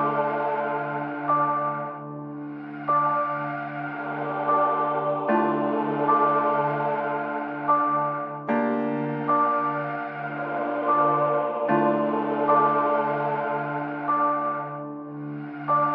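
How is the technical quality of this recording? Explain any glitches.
The technical quality is limited by plainly audible compression damage that runs through the whole recording. This is likely MP3 compression, and the degree of damage fits a low bitrate of about 64 kbps. With so few bits, the encoder drops weaker frequency components, which switch on and off from frame to frame. The result is a watery, swirling texture, metallic chirping on bright, hissy detail, and smeared attacks.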